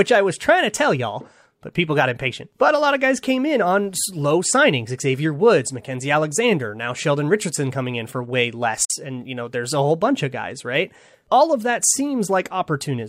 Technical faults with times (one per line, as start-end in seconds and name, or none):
8.85-8.91 digital broadcast dropout